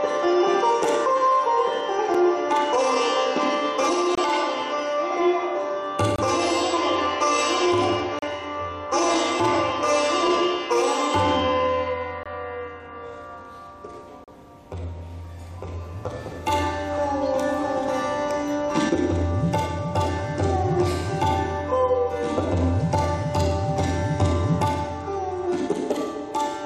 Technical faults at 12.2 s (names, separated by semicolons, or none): gap between stream segments